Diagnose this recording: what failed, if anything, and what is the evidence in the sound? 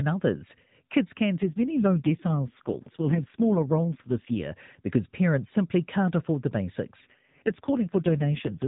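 An AMR rate drop in the codec: from 1.42 to 4.44 s and 7.02 to 8.67 s the speech turns buzzy and synthetic, which fits a fall from 12.2 to 4.75 kbps. On a spectrogram the 4 kHz ceiling holds with no gap, but harmonics smear.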